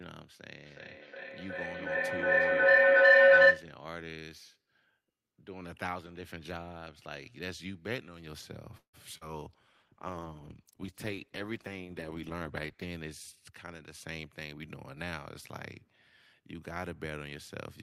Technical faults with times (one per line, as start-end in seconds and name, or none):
0.63-3.73 feedback howl
8.77-8.95 call audio freeze
9.17-9.29 short concealed packet loss
9.47-12.94 call bitrate drop
13.50-14.54 jitter buffer speed-up